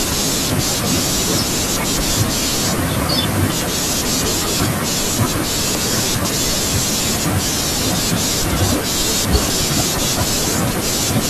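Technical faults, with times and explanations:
0.5–1.0 s, 3.0–3.5 s, 5.75–6.25 s: chunks out of order. In each span a 250 ms chunk plays one slot late, after the chunk that should follow it. Nothing is lost, but the sound jumbles briefly, with three hard joins.
8.5–9.5 s: chunks out of order. One 250 ms chunk is held back three slots and plays after the three chunks that should follow it. The longer one-second scramble sounds jumbled, again with three abrupt joins.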